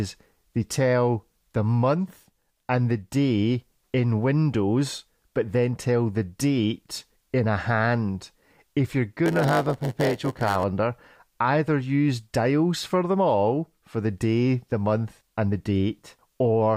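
From 9.25 to 10.64 s the speech picks up a steady 100 Hz buzz and drags, running at about 0.92 times normal speed. This is a block size mismatch (padded): each stage hands on blocks shorter than the next expects, and the shortfall is filled with silence. On the waveform this shows as short near-silent gaps repeating every 10 ms; a spectrogram shows thin vertical gaps at that spacing and a comb of lines at multiples of 100 Hz.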